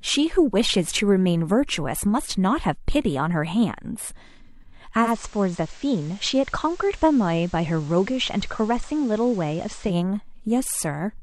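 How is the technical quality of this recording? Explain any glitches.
The recording has one clear glitch in this speech clip. From 5.01 to 9.97 s it shows digital radio blending to analogue: the receiver lost the digital stream and cross-faded over 117 ms to the station's FM broadcast. During that stretch, hiss sits roughly 25 dB below the signal, and the level drops about 3 dB. Unlike a codec drop, it switches back afterwards.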